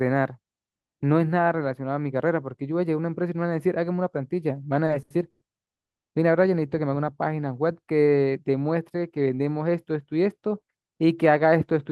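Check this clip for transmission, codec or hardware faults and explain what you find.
Two network-timing faults sit back to back in the middle of this speech clip: a run of stutter followed almost immediately by a short freeze.

Between 4.85 and 5.68 s the speech catches and drags five times, with the last sound briefly held on in each hitch. The longest hold is 110 ms, and together they fill about 250 ms, roughly 30 percent of that stretch. These are repeated stalls (stutter). Packets reached the receiver late or more slowly than they were played out, so the jitter buffer kept running dry, and each time the receiver extended the last sound until data arrived. Nothing is lost; the speech is simply stretched and uneven.

From 5.74 to 6.13 s the audio drops to dead silence for 370 ms, then resumes exactly where it left off with no speech skipped. This is a call audio freeze, likely caused by packets being held up in transit long enough to empty the jitter buffer completely. 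Rather than being lost, the wait is inserted into the stream as a gap, so everything after it plays 370 ms later than before.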